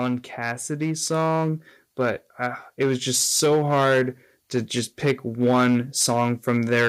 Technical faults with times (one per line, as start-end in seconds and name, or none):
0.00-6.88 hard clipping
1.02 microphone volume stepped up